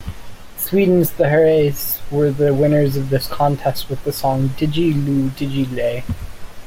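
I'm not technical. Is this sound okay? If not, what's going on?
No. A faint hiss or roughness rides along with the speech from start to finish. It is called sample clock jitter. The device that turns sound into digital samples keeps time with a clock, and here that clock wobbles slightly. Each sample is taken a tiny bit early or late, by roughly half a millionth of a second. When the sound changes fastest, those timing slips cause the biggest errors. So the roughness grows on loud and sharp sounds and disappears in the pauses.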